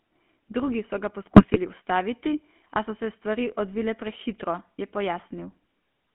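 The whole clip runs through a GSM full-rate codec. The band stops near 3.4 kHz, and the pulse-driven vocal model leaves that buzzy, gravelly roughness, consistent with 13 kbps. From 1.36 to 1.58 s, GSM bit errors corrupt the decoder's filter, pitch or gain values. The speech briefly breaks into squawks and gargling pops.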